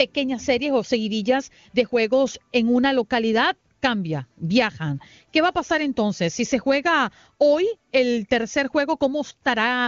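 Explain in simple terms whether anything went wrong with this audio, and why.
Nothing went wrong here: the speech is carried by the AMR wideband (HD Voice) phone codec working as designed, and there is no fault to report.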